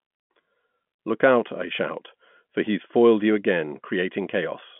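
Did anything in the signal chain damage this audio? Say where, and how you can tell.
No, nothing in the chain damaged this speech; the only shaping is the G.711 telephone coding you'd expect on a landline, which holds the sound to roughly 150 Hz–3.4 kHz with nothing above about 3.7 kHz, consistent with a standard 64 kbps mu-law line.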